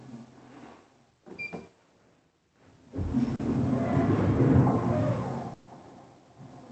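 At 3.35 to 3.41 s, short concealed packet loss leaves a 40 ms hole, filled by continuing the preceding sound, which gives a brief smear rather than a hard click. At 3.70 s, a single sharp click with no missing sound marks dropped samples, likely just one lost sample that made the waveform jump. From 5.53 to 5.69 s, a burst of packet loss removes 140 ms. The continued sound fades as a held buzz or hiss before the audio resumes further on, longer and more obvious than the earlier smear. Through the call path, the audio is band-limited to about 8 kHz.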